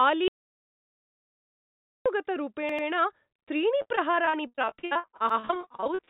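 Audio dropout to silence from 0.28 to 2.06 s: the speech cuts off into silence with no room tone, likely because the input link failed while zeros kept being written.

Repeated buffer at 2.69 to 2.88 s: a roughly 93 ms piece, which fits a 4096-sample buffer, plays twice more with hard joins, giving a brief stutter when fresh audio arrived late.

Repeated packet loss (robotic sound) from 3.82 s to the end: packets keep going missing, each gap patched by stretching the last sound, so the speech turns choppy with pieces missing.

Within that stretch, another repeated buffer at 5.29 to 5.39 s plays the same 93 ms chunk once more. All of this sits on a narrowband call path with nothing above 4 kHz.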